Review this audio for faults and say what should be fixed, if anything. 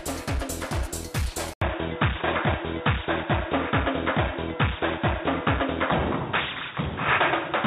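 At 1.53 s the sound drops out for 80 ms. From there to the end it turns dull and boxy, with nothing above 3.8 kHz. The level shifts by a few decibels, and a new, faint noise floor appears well below the signal. This is likely an input switched to a poorer device, such as another microphone or a headset's call profile, with its narrower band and its own tone. To prevent it, lock the recording input so the system cannot change devices mid-take.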